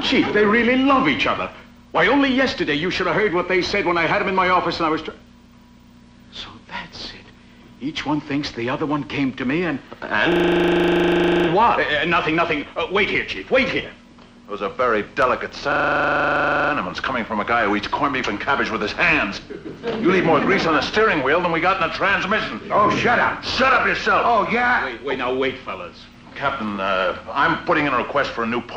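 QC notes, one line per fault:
Throughout: MP2 compression, plainly audible. Upper sub-bands drop out and flicker while the remaining bands sound coarse and gurgling, which fits MPEG Layer II at around 80 kbps as the likely cause. A spectrogram shows a ragged, blocky top edge with bands switching on and off.
10.32–11.48 s and 15.72–16.72 s: system hang loop. A 40 ms slice repeats exactly, 29 times and then 25 times, giving a rapid 25 Hz stutter while playback cycles one buffer. The waveform shows identical repeating blocks, and the spectrogram shows vertical stripes every 40 ms.
27.13–27.16 s: DAB burbling. A few brief watery blips occur where bit errors at a low rate slipped past error correction into the MP2 data, corrupting samples or scale factors in single sub-bands. The spectrogram shows isolated bright patches confined to narrow frequency bands.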